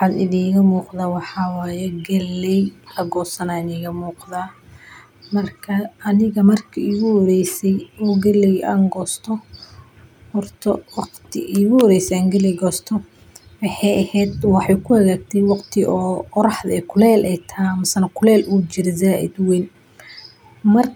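Listening to the speech recording, nothing stood out as a technical problem at any point.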